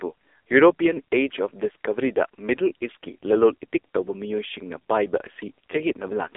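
Thin, boxed-in and buzzy from start to finish, this speech sits in a narrow telephone band of roughly 300 Hz to 3.6 kHz, with nothing above 3.8 kHz and no low-end body. The cause is the AMR narrowband mobile codec, which samples at 8 kHz and rebuilds the voice from a vocal-tract model driven by sparse pulses. The heavy synthetic buzz fits one of its lowest bitrate modes, around 5.9 kbps.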